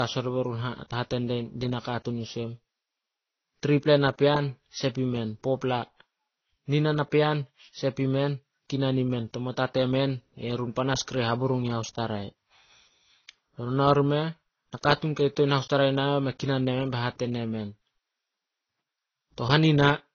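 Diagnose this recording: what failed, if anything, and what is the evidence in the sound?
The codec stage is where this went wrong: the speech has nothing above 6.6 kHz for the whole clip, with two different flavours of compression smearing layered together, likely transcoding between lossy codecs. It sounds like a low-rate AAC pass re-encoded into Vorbis, which kept the first cut-off and stacked fresh artefacts on the old ones.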